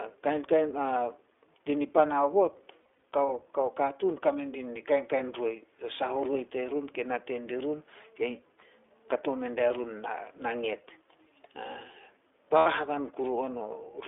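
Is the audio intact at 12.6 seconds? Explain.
No. From 12.58 to 12.67 s there is a dropout from lost iLBC frames. About 80 ms of audio is missing, which fits four consecutive 20 ms frames. The decoder covers the hole by repeating the last pitch cycle blended with noise, so the sound turns into a short, held, slightly buzzy and breathy vowel instead of continuing naturally. On a spectrogram the harmonics freeze into flat, evenly spaced horizontal lines smeared with noise. The waveform shows the same cycle repeating. The voice is right again almost immediately afterwards, because each iLBC frame decodes on its own.

Around this moment, and at all other times, the iLBC codec also shapes the sound. The line passes only 300 Hz to 3.5 kHz, and the codec's damage is plainly audible as a rough, slightly synthetic quality. That fits iLBC's 15.2 kbps mode, which codes each short frame's excitation independently. 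On a spectrogram there is an empty band above 3.5 kHz and very little energy below 300 Hz. The harmonics look grainy and less continuous than in wideband audio.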